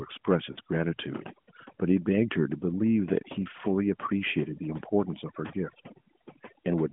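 Throughout, the background sits near silent with twinkling specks: overdone noise removal, with bands near the noise estimate pushed too far down. From 0.52 to 0.59 s, a 40 ms dip marks lost AMR speech frames, fitting two dropped 20 ms frames concealed by repeated settings; a shorter 20 ms dip at 5.48 to 5.52 s suggests one.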